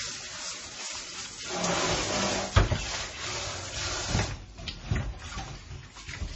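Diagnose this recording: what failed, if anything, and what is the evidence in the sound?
Codec stage, throughout: the likely cause is heavy MP3 compression. Nothing reaches above 8 kHz, and weak spectral lines flicker between frames, giving a watery swirl consistent with 24 kbps.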